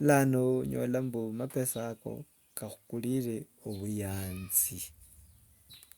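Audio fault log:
No faults detected.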